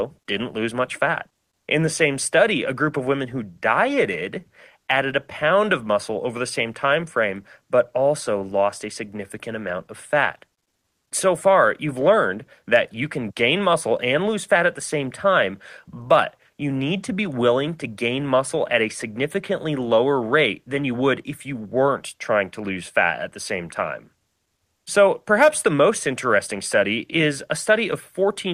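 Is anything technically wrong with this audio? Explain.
No, nothing technically wrong stood out on listening to this speech recording.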